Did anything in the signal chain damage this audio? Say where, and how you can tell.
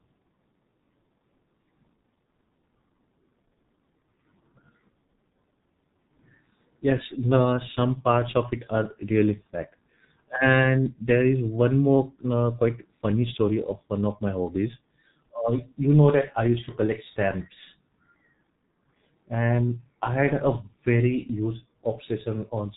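Yes. Throughout, the speech is muffled and hoarse with smeared consonants and nothing above 3.8 kHz. This points to heavy G.723.1 codec damage near 6 kbit/s.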